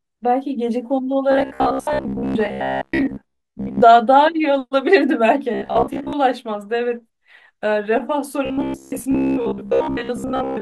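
Audio likely arrived too seldom, so short buffers were repeated to fill the gaps, which fits a roughly 15 ms buffer. The result is robotic sound from repeated short buffers: a rigid, metallic buzz near 66.7 Hz that loosely tracks the speech while most of the real audio is skipped, from 1.32 to 3.82 s, 5.54 to 6.13 s, and 8.46 s to the end.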